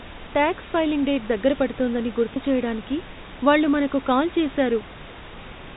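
At 2.34 to 2.36 s, between "ఫైలింగ్ డేట్ దగ్గర పడుతోందని" and "చేయడానికి వాళ్ళు మనకి కాల్", packet loss with pitch repetition fills a gap that fits one lost 20 ms packet. The receiver repeats the last pitch cycle, giving a brief buzzy hold. On the waveform this shows as identical repeating periods, and on a spectrogram as flat, frozen harmonics.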